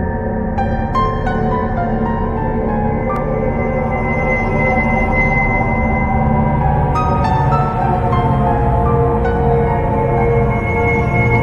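A block of digital silence falls at 3.16 s. For about 1.45 ms the output drops to zeros, which fits a 64-sample block left unfilled, then jumps straight back with no fade, so the abrupt edges produce a single short tick.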